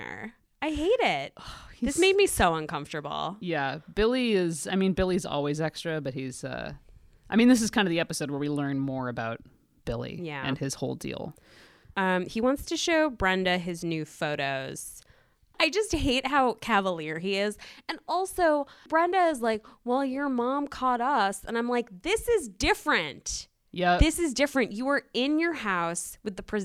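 No technical faults can be heard anywhere in the recorded speech, so there are no events to place in time.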